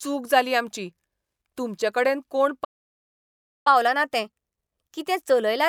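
At 2.64 s the speech cuts out into silence. It stays silent for about 1.01 s, until 3.67 s. This is a playback stall. Most likely the player ran short of data, or its thread was held up, so nothing reached the output. When the sound returns, it resumes mid-flow after the gap.

From 3.67 s to the end, the speech runs fast. This is catch-up at higher speed. The player is draining its backlog by resampling at 1.1 times normal speed. Because resampling raises speed and pitch together, the speech sounds slightly hurried. It is also pitched up by about a semitone and a half. It stays that way through to the end of the clip.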